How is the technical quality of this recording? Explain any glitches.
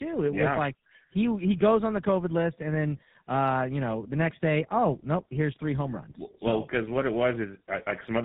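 The quality is poor throughout, because of tandem speech coding. The call passed through an iLBC link, then G.711, then GSM full rate, so two speech coders each re-encoded the previous one's damage. The result is rough, muffled and warbly speech with nothing above 3.8 kHz.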